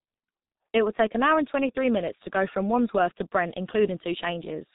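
From start to finish, the speech carries heavy G.723.1 codec damage. This is an early internet-telephony codec. It works in 30 ms frames and models the voice very coarsely. The sound points to a rate near 6 kbit/s. Nothing passes above 4 kHz, so the speech is muffled and dull. The voice model updates slowly. This leaves a hoarse, buzzy texture, and consonants smear into each other.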